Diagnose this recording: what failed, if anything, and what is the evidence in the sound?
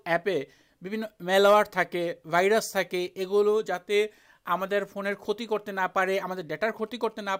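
The analogue circuit rectified GSM signalling bursts from a nearby 2G phone, producing galloping 217 Hz buzzes from 6.17 to 7.28 s, about 30 dB down.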